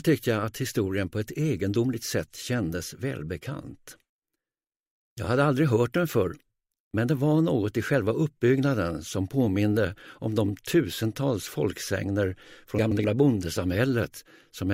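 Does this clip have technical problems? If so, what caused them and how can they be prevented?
Yes. Frames out of order between 12.79 and 13.04 s. Two neighbouring blocks of 128 ms each were decoded in swapped order. That stretch plays its second half first, then its first half. You hear a garbled flutter. The timing fits runs of about four frames each. No time is lost overall. Preventing this means using sequence numbers and a jitter buffer that reorders frames before decoding.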